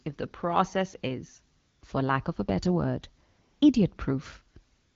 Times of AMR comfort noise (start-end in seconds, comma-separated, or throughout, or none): 1.59-1.81, 3.29-3.61, 4.73-4.96